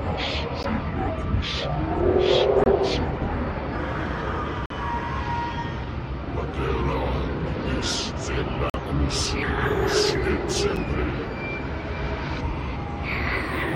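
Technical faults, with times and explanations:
0.63, 2.64 to 2.66, 4.66 to 4.70, 8.70 to 8.74 and 10.76 s: gap between stream segments. The sound stops dead for 8 to 45 ms each time, with hard edges, and the dropouts line up with a 2 s spacing. Each marks a boundary where the next segment's time stamp starts slightly after the previous one ends. The player fills that shortfall with silence, so the clip gains time rather than losing any audio.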